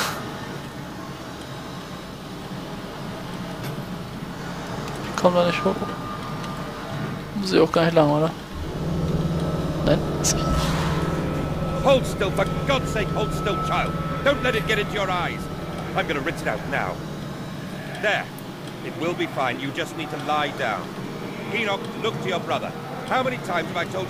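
No dropouts, glitches, distortion or level problems can be heard at any point in the audio.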